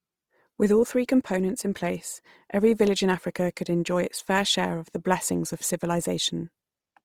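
Throughout, the speech sounds grainy and rough, its finer detail filled in with noise, likely from Opus compression in its CELT music mode at about 24 kbps.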